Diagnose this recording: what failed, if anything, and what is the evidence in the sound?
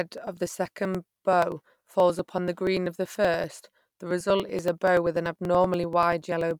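Periodic USB or driver dropouts, at the driver or buffer stage. From 0.08 s to 6.51 s the speech carries a steady train of small ticks every 0.096 s, roughly ten per second, audible only where there is signal. Each tick is a gap of around 4 ms where audio was skipped rather than padded, so the waveform jumps. A background task stalling the USB bus or audio driver on a fixed schedule explains the even spacing.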